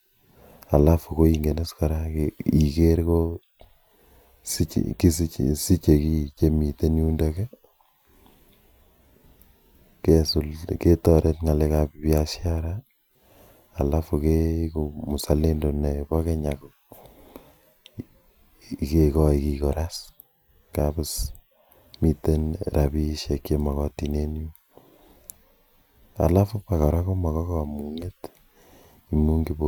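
No technical faults are audible anywhere in the speech recording.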